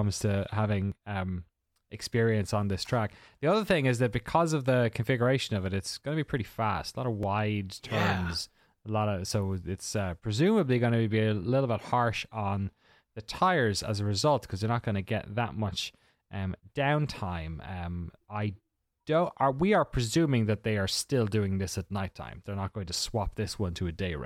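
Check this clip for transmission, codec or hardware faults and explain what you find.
Two short glitches stand out, both consistent with a dropped buffer (overrun). At 0.92 s, just before "um experience on this", and at 7.23 s, right after "lot of", the speech jumps. The likely cause is a buffer overrun: the software failed to read its samples before the hardware overwrote them, so a slice of audio, around 10 ms at the first point and around 20 ms at the second, vanished and the neighbouring audio was spliced together with no gap, leaving an abrupt skip rather than silence.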